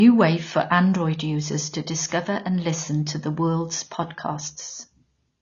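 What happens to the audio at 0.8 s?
At 0.8 s the speech carries what is most likely AAC compression, a fault present for the whole clip rather than starting there. Nothing sounds above about 6.9 kHz, so the speech is dull and muffled, and the damage is plainly audible as a smeared, warbling, fizzy texture on sustained sounds and sibilants. The encoder quantises each frame's frequency lines coarsely, a pattern that points to a low bitrate around 24 kbps.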